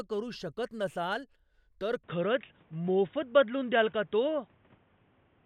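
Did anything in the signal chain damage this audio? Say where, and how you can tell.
Yes. From 2.04 s, right after "करू शकत नसाल तर", the speech abruptly loses everything above 3.8 kHz and stays band-limited to the end, turning dull and boxy with no gap and no real change in level. A new, quiet noise floor, roughly 35 dB under the speech, comes in at the same moment. This points to the input stage: the system likely switched to a poorer input device mid-recording, one with a narrower passband and its own tone and background noise.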